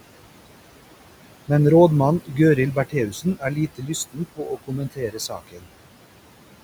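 From the start, the audio carries noise suppressor artifacts. The room noise, which sits about 15 dB below the speech, is pulled down by about 18 dB in the gaps, then rises back under each phrase as the suppressor releases the bands it judges to hold voice.

Speech cut by the noise suppressor occurs at 3.1 to 3.91 s, where roughly a third of a second of soft speech is mistaken for noise and turned down by up to about 16 dB. It happens again from 4.12 to 5.68 s, with a deeper cut of up to about 18 dB affecting around 0.7 s in total. In both stretches, quiet consonants and word endings fall under the suppressor's threshold along with the background, so they sound swallowed or faint.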